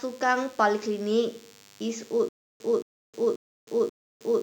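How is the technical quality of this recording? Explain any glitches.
The recording has two technical faults: a constant buzz and a stutter near the end.

Throughout, a nearby DECT cordless phone's 10 ms radio bursts are rectified by the audio circuitry, producing a thin 100 Hz buzz with many harmonics, roughly 25 dB below the speech.

From 2.29 s to the end, the stream likely stalled and retried, causing a stutter with silent gaps: a 223 ms fragment repeats four times, each followed by 313 ms of digital silence, and the intended audio is lost.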